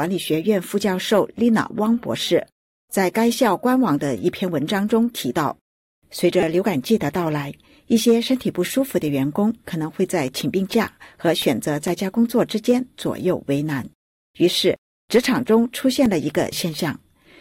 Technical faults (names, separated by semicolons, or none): repeated buffer; CD scratch ticks